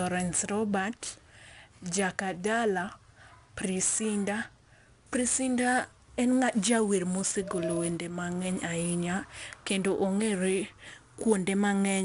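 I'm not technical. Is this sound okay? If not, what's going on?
No. The whole recording has been squeezed with 4-bit ADPCM compression. Each moment of sound is stored as a rough small step from a guess, so a gritty hiss rides along with every loud part of the speech. Nothing above 10.6 kHz survives, which dulls the sound.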